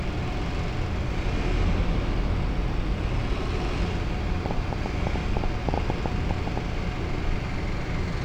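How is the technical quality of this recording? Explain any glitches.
The recording has one clear glitch, a burst of ticking partway through.

Train of clicks, 4.46 to 6.58 s: around fifteen similar pulses arrive unevenly, about 7 per second, peaking roughly 15 dB above the audio. The likely cause is outside interference or a faulty connection or power supply repeatedly injecting spikes, heard as popping over the sound.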